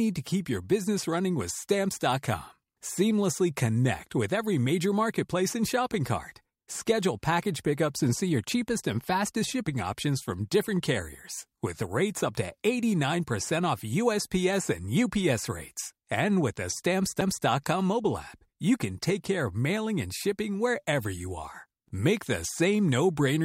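At 17.21 s the speech is interrupted by a CD skip. A physical knock or a disc flaw pushed the laser off its track onto a neighbouring turn of the spiral, so the player muted briefly, for only a few milliseconds, and resumed reading from a different point. The result is a short tick followed by an abrupt discontinuity, as the speech picks up from a position displaced by whole revolutions of the disc.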